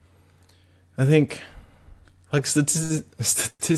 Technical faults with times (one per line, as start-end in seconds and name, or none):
2.83-2.93 short stall from a late packet
3.50-3.74 short stall from a late packet